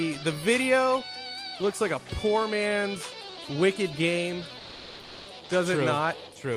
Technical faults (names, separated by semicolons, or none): comfort noise in place of the background